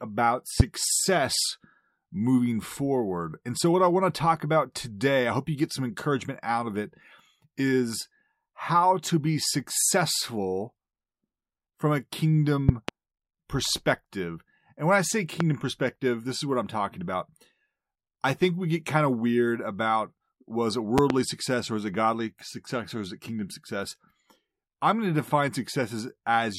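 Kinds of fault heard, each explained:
Loud pop: A sudden voltage pulse, likely from a plug, switch or static, lands on top of the speech. Four sharp bursts stand out, about 20 dB above it. Those near 12.7 and 21.0 s are double pops. The speech continues underneath.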